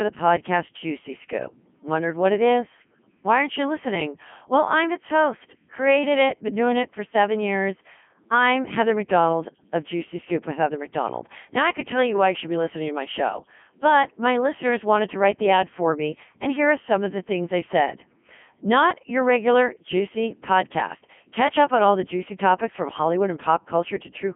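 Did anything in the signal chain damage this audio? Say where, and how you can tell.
Yes, at the codec stage: the whole speech clip has gone through a Codec 2 vocoder, and the damage is heavy. It sounds robotic and buzzy because only pitch, voicing, energy and envelope survive, rebuilt from sine waves. The narrow 150 Hz to 3.4 kHz band, with nothing above 3.7 kHz, fits its 3.2 kbit/s mode.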